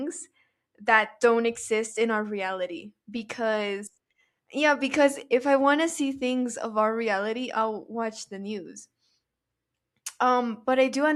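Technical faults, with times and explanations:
No technical faults, with times and explanations, to report.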